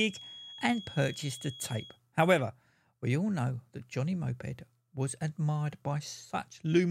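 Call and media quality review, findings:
Feedback whistle, 0.0–2.0 s: thin steady tone near 3.3 kHz under the speech, around 20 dB down, level swelling and fading slowly, then gone. Likely cause: loudspeaker-to-microphone loop at the edge of feedback, so one high frequency keeps ringing without building up.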